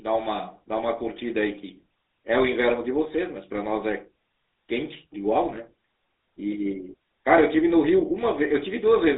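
From start to finish the speech has gone through the GSM full-rate codec, squeezed into a narrow line band of about 300 Hz to 3.7 kHz, with a plainly audible buzzy, gravelly grit. That fits the sparse pulse excitation of a 13 kbps coder.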